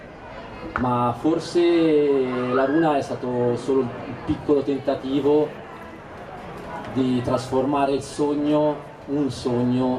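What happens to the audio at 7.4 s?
Nothing goes wrong at 7.4 s: the audio runs on intact through that moment, with no dropout, click, glitch or other fault to be heard there.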